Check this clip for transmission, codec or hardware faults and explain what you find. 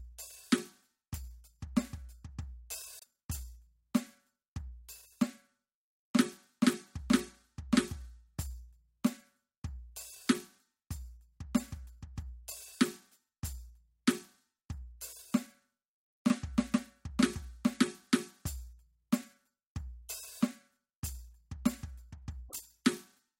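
Two brief faults stand out in this music, both consistent with a broken MP3 bit reservoir. At 2.99–3.05 s and 22.48–22.55 s the music skips forward and a short disturbance fills about two to three 26.1 ms frames. The likely cause is that frames were cut and the next frames pulled their borrowed data from the wrong frame's bytes. A plain dropout would leave clean silence, but here the music lands further ahead.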